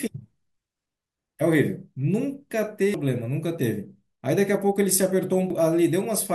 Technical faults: damaged data in a compressed stream

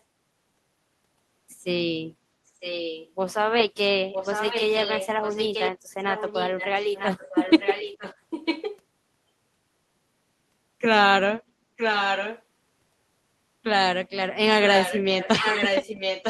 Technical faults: echo leak

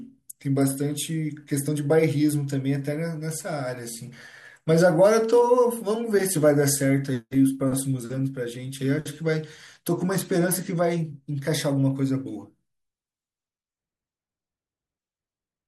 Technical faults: none

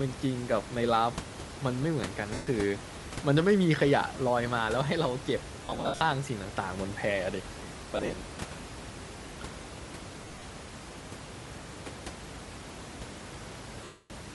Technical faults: Bluetooth LC3 compression; lost LE Audio frames

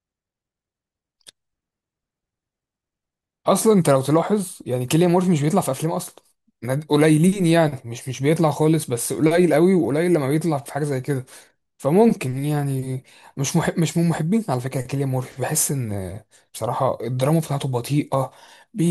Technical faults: none

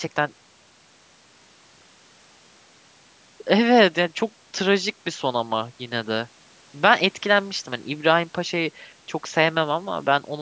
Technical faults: none

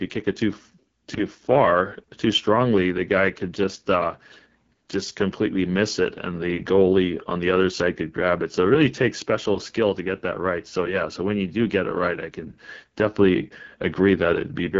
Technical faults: AMR wideband (HD Voice) codec

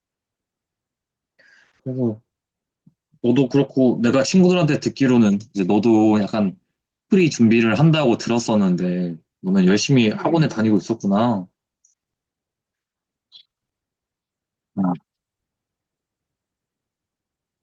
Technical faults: dropped samples

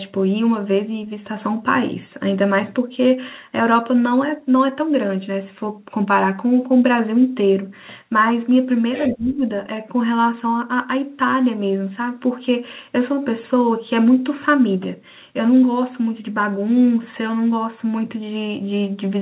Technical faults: other side's voice leaking through; speech suppressed in double talk

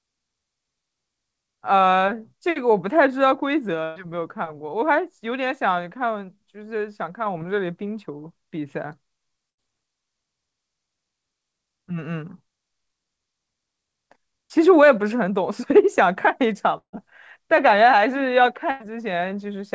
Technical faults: burst of packet loss; short concealed packet loss

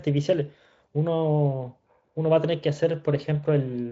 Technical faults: none

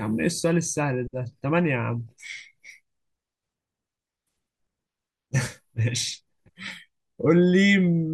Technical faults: DAB burbling

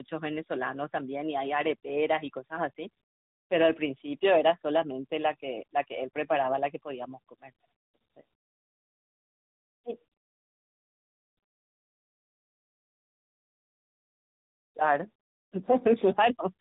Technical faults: tandem speech coding

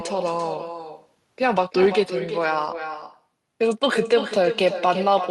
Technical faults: echo with no canceller

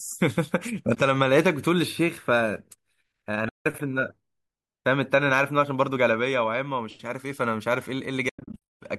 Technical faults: AAC frame loss with muting

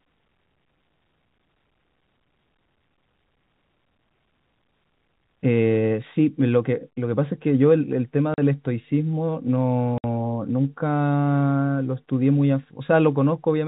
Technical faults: packet loss filled with silence

